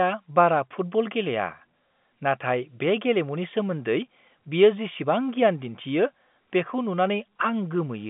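Nothing goes wrong anywhere here: the speech comes over ordinary G.711 A-law telephone coding, so it sits in the familiar narrow phone band, with nothing above about 3.7 kHz.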